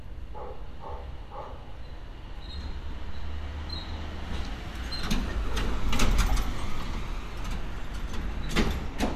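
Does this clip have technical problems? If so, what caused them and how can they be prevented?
No, nothing technical stands out in these sounds, so there's no cause to trace and nothing that needs preventing.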